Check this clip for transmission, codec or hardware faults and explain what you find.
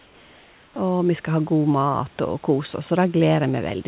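One fault shows up in the opening stretch. Across the clip the sound carries nothing above 4 kHz, as a narrowband call codec leaves it.

Comfort noise in place of the background, 0.00 to 0.76 s: the sender likely stopped transmitting while its voice detector heard no speech, and the receiver filled those 760 ms with synthetic noise. The room's textured background, about 31 dB below the loudest sound, becomes a flat, featureless hiss about 3 dB quieter.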